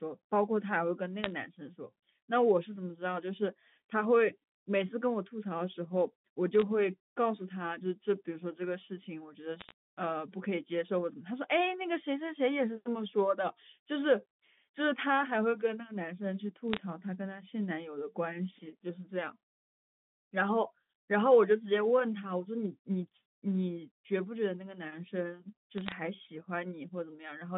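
Bit errors on a digital phone line crackle over the speech at 1.24–1.32, 6.60–6.62, 9.60–9.72, 16.73–16.78 and 25.78–25.92 s. Roughly a few tenths of a percent of bits flip, each corrupting one sample, and hits on high bits or the sign of loud samples become sharp ticks: lone spikes on the waveform, thin vertical streaks on the spectrogram.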